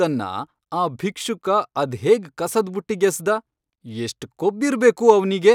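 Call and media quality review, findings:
Nothing stood out on listening to this speech recording.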